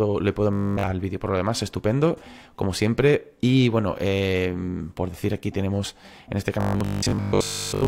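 From 0.53 to 0.89 s and again from 6.61 s to the end, robotic sound from repeated short buffers: a rigid 50 Hz buzz, likely from 20 ms chunks looping, unlike dropouts' silent gaps.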